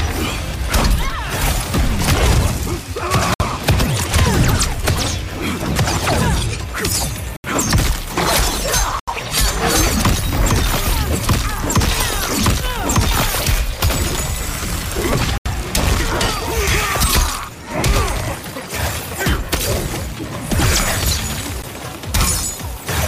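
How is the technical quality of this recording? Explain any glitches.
The recording is marred by five dropouts. Each is a block of digital silence: at 3.34 to 3.40 s (60 ms), 7.36 to 7.44 s (76 ms), 9.00 to 9.08 s (80 ms), 15.38 to 15.46 s (80 ms), and 21.62 s (about 13 ms). The output buffer likely went unfilled, so the sound dropped abruptly to silence and back. The longer gaps sound like short holes and the last like a tick. On a waveform they appear as flat lines, and on a spectrogram as blank vertical strips with broadband clicks at each edge.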